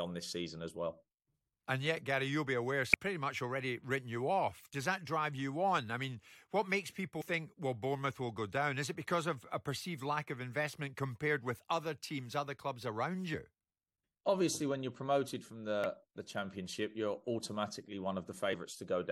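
Damaged data in the compressed speech stream produces brief glitches at 2.93, 7.20–7.22, 13.33, 15.84 and 18.53 s. Corrupted frames make the decoder lose sync and search for the next frame header. Each shows as a thin broadband vertical streak on a spectrogram and a discontinuity in the waveform.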